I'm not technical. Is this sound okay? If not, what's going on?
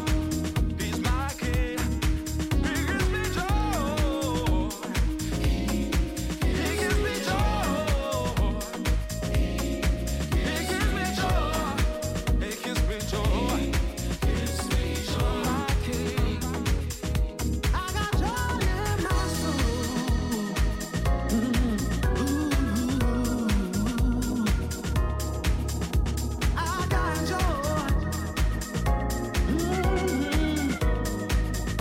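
Yes, nothing in this recording points to a technical problem, so the signal comes across as sound and intact throughout.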